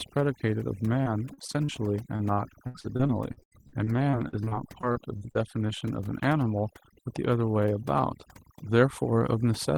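From the start the background sits in near silence dotted with twinkling specks. That is overdone noise removal. The noise reduction was set far too aggressively, so individual frequency bands get pushed down or shut off whenever their level falls close to the tool's noise estimate, and the softer components of the voice get cut along with the hiss.

From 1.03 to 1.70 s the sound turns choppy, with short pieces of the voice dropping out. This is repeated packet loss, producing a robotic sound. Audio went missing in several brief holes, the longest about 40 ms. Each hole was filled by stretching out the sound just before it, and with the holes so close together the repeated fill takes on that mechanical quality.

The same repeated packet loss with robotic sound returns more heavily from 2.16 to 5.71 s. Across that span the voice stutters, and roughly a fifth of it is patched-over sound. The gaps come in quick succession and reach about 78 ms. 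Each one is again covered by continuing the preceding sound, so the syllables break apart until the stretch ends.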